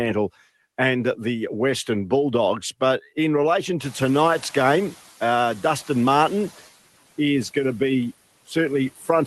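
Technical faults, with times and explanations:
3.84–6.50 s, noise suppressor catching up: Just after "in relation", the room noise jumps by about 20 dB around 4.0 s. For roughly 2.7 s it comes through much louder than before, because the suppressor's noise estimate still reflects the quieter background and removes too little. As the estimate adapts, the noise sinks by about 6 dB and settles about 21 dB below the speech. On a spectrogram, a broadband haze rises abruptly and then fades over those seconds. The waveform's floor between syllables thickens, then narrows.
8.96–9.09 s, speech cut by the noise suppressor: Near the end, the suppressor treats part of the speech as background and pulls it down with the noise, by about 12 dB at its deepest. The affected stretch lasts roughly 150 ms, and that portion sounds swallowed and faint. It is the kind of soft, low-energy material that a suppressor most easily misreads as noise. 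On a spectrogram the energy of that segment thins out or partly vanishes into the dark floor. In the waveform the envelope dips sharply for that fraction of a second.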